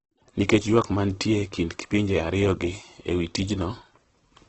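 Throughout the speech, the encoder has likely been starved of bits: the sound points to Opus compression in its CELT music mode, at a rate that fits roughly 12 kbps. With so few bits, bands are filled by folding lower ones or with noise rather than left empty. The speech therefore turns heavily grainy and rough instead of swirling. The wideband limit leaves nothing above 8.2 kHz, which dulls the top end.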